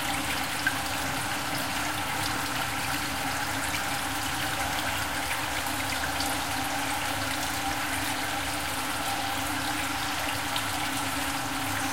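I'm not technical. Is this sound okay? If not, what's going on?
No, there's a click about every 1.37 seconds, from 0.99 s to the end at 11.91 s, roughly ten in all. That's clock drift buffer slips: two devices likely ticking at slightly different speeds, so every so often a tiny chunk of sound gets skipped or repeated.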